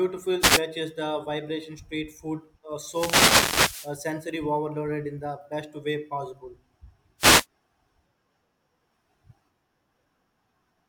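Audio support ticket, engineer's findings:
Short static swishes over speech at 0.39–0.61 s, 2.84–3.96 s and 7.18–7.46 s. Wireless microphone noise hits: analogue FM link fading on reflection cancellation, receiver noise rising through.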